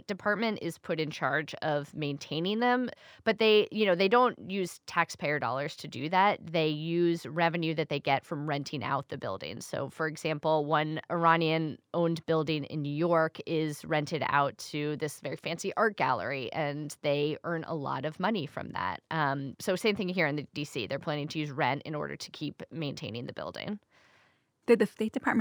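Throughout the speech, sibilants carry a faint metallic shimmer over a dulled top end: imaging from linear upsampling, which fits 24 kHz audio raised to 44.1 kHz, leaving mirrored copies from 12 to 24 kHz roughly 40 dB down.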